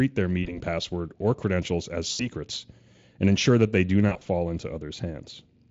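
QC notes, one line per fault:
0.43–0.59 s, VoIP packet loss concealed by the speech codec: about 20 ms of audio lost, fitting one dropped frame. The decoder repeats its last pitch and filter, giving a brief smear that recovers gradually.
2.11–2.28 s, VoIP packet loss concealed by the speech codec: about 80 ms lost in one gap. The extrapolated sound fades away, and the speech stays weak while the decoder state rebuilds.
4.09–4.26 s, VoIP packet loss concealed by the speech codec: about 80 ms lost as short gaps of up to 20 ms scattered over 160 ms. This produces repeated brief concealed glitches through the Speex stream, which itself shows little or no coding damage.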